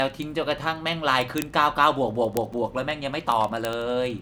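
From 0.1 s right through to 4.19 s, the speech carries word clock ticks: a steady run of sharp clicks roughly every 40 ms, around a hundred in all. The receiving device was free-running on its own clock instead of locking to the sender's, so each time the two clocks slipped past each other it dropped or repeated a single sample. A tick rate that fast fits clocks drifting apart by something like 500 ppm.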